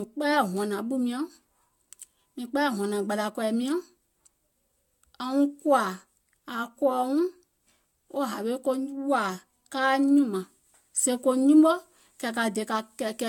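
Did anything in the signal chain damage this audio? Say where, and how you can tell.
Yes, at the codec stage, throughout the speech. It sounds swirly and hollow, attacks are smeared, and nothing reaches above 17 kHz. This is generation loss, likely from about five AAC-LC passes at 96 kbit/s. Each pass requantised on a shifted frame grid, so the artefacts stacked up.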